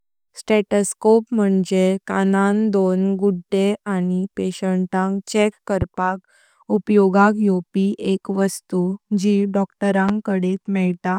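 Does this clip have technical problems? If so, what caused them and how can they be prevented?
Yes. A sudden voltage step or pulse, likely from a plug being disturbed, a switch, a static discharge or a driver glitch, was added to the signal path, producing two loud pops in this speech clip. Each is a single sharp thump lasting about 30 ms, the first at 5.82 to 5.85 s just after "गुद्दे आनी पेनिटेंटांग चेक" and the second at 10.09 to 10.12 s. Each peaks roughly 10 dB above the speech, which continues underneath. Securing connectors, grounding equipment against static and keeping audio drivers stable would prevent it.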